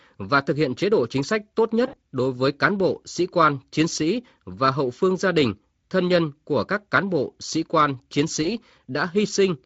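Speech, with VoIP packet loss concealed by the speech codec at 1.87 to 1.95 s and 8.43 to 8.48 s. About 60 ms and 20 ms of audio were lost. The decoder extrapolated the last pitch and filter, giving a brief, fading smear.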